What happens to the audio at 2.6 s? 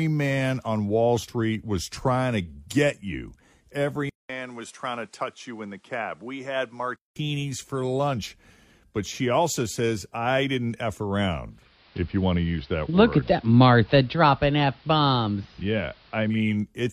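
Nothing goes wrong at 2.6 s: the speech continues intact through that moment, with no dropout, click or distortion to be heard.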